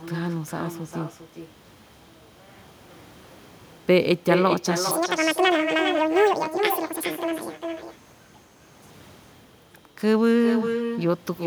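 Right from the start and through the whole recording, every phrase gets shadowed by a second copy arriving roughly 0.4 seconds later, sitting about 7 dB under the original. That's echo with no canceller: the far end is playing the call over a loudspeaker, their mic grabs it, and nothing strips it out before it travels back. The returning copy sounds quieter and thinner, so the speech keeps trailing a hollow, delayed ghost of itself.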